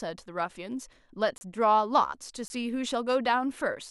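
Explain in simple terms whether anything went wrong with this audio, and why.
Blocks of digital silence hit this speech at 1.38 s, lasting 30 ms, and at 2.48 s, lasting 20 ms. Each time, the audio briefly drops to silence and snaps back with no fade, so you hear a tiny hole.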